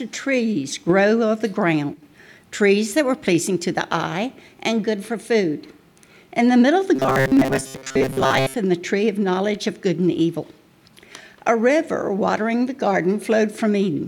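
From 6.96 to 8.56 s the sound turns into a rigid metallic buzz near 133 Hz: robotic sound, likely from repeating a roughly 7.5 ms buffer while real audio is skipped.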